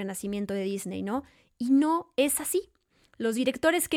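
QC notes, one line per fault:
No faults found.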